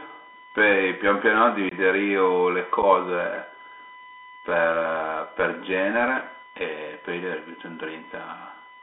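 From the first moment there's a steady USB whine at 1 kHz, roughly 25 dB under the speech. That's the bus's 1 ms frame current leaking in through power or ground.

Throughout, the Bluetooth CVSD headset codec squeezes the speech into roughly 250 Hz to 3.5 kHz, which points to a 64 kbps link. The one-bit adaptive steps can't keep up, so sibilants turn scratchy and a grainy hiss sits underneath.

At 1.69 to 1.73 s there's unconcealed Bluetooth headset packet loss: a 22.5 ms hard-edged hole, consistent with a few dropped packets, after which the speech comes back briefly quieter. Another 7.5 ms dropout follows at 2.82 s as a single packet goes missing.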